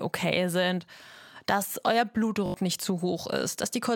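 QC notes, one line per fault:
2.46–2.54 s, repeated buffer: a very short slice of the speech plays five times in a row with a hard join at each restart, giving a quick buzzy stutter. It fits a 20 ms buffer replayed while fresh audio arrived late, dropping roughly 70 ms.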